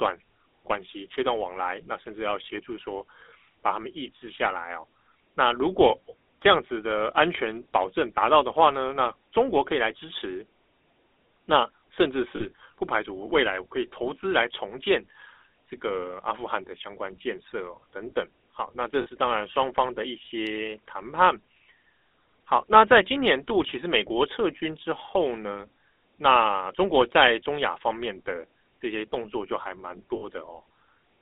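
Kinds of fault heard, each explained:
GSM full-rate codec: The whole clip has passed through the original GSM speech coder. It models the throat and mouth as a filter and drives it with sparse, evenly spaced pulses instead of the real excitation. The speech is buzzy and gravelly throughout, and the damage is plainly audible. The band runs only from about 250 Hz to 3.6 kHz, so it sounds thin and boxy. That fits the 13 kbps full-rate mode.
lost GSM frames: In three places, stretches of the coded stream never arrived. The decoder covered each gap by reusing the last good frame's settings. You hear this as a short, rough, metallic ring where the speech should continue. The gaps start at 12.36 s and 19.02 s, each lasting 40 ms, and at 30.16 s, lasting 60 ms. None is long enough to fade to silence.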